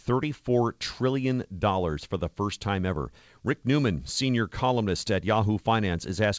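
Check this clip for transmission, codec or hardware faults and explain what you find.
No transmission, codec or hardware faults found; the speech comes through the WebRTC call path as expected, with nothing above 8 kHz, which fits a G.722 wideband link.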